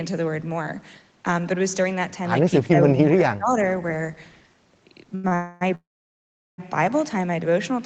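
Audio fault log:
2.63 to 3.55 s, speech suppressed in double talk: The speech sinks by up to about 20 dB in patches adding up to roughly 0.7 s, so it sounds like someone briefly turned the fader down mid-phrase. This is likely an echo canceller losing track during double talk: with both ends talking at once, it couldn't separate the local talker from its own loudspeaker echo, so it squashed both.
5.15 s and 5.28 s, short stall from a late packet: Two quick hitches, first a sound held for 85 ms and then another held for 33 ms, each held too long. Each time a packet arrived after it was due, the jitter buffer ran dry, and the receiver stretched the last bit of audio until the data turned up. Playback then continues from exactly where it stopped, so nothing is lost, just pushed later.
5.35 to 5.63 s and 5.75 to 6.60 s, call audio freeze: Two longer hang-ups. The first fills 258 ms with a fading continuation of the last sound and never goes fully quiet. 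The second runs 832 ms, and about 760 ms of that is dead silence after the fill gives out. This is likely packets bunching up in transit and emptying the jitter buffer. The audio resumes right where it left off, so a gap has been inserted rather than anything dropped. The Opus call path underneath, band-limited to 8 kHz, isn't what's at fault here.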